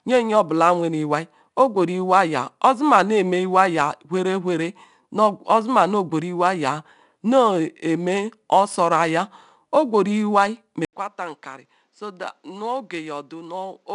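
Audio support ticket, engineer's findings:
4-bit ADPCM compression, whole clip: each sample coded as a coarse step from a prediction. Gritty hiss rides on every loud speech passage and roughens sharp onsets. Nothing above 10.6 kHz, which fits a sample rate near 22 kHz.

Input switched to a poorer device, likely cause, 10.85 s to end: an 80 ms gap, then a narrower path. Speech turns duller, cut off above 8.2 kHz, drops about 10 dB, with a new noise floor roughly 45 dB below the speech.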